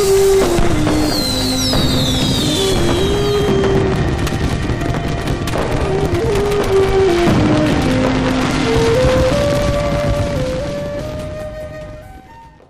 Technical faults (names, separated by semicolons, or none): hard clipping